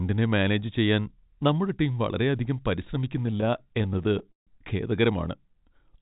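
Speech, carried over a call path whose spectrogram shows nothing above 4 kHz, consistent with G.711 mu-law, has repeated stalls (stutter) between 3.26 and 4.49 s. Twenty-two short gaps fall in that stretch, the longest 150 ms, together about 0.37 s, roughly 30% of the span. Packets arrived late, the jitter buffer kept running dry, and the receiver stretched the last sound each time, fading it in longer waits. Nothing is lost, but the speech drags and stutters. A spectrogram shows smeared, repeated slices with flat, held harmonics, and the waveform shows copied periods and brief tapering dips.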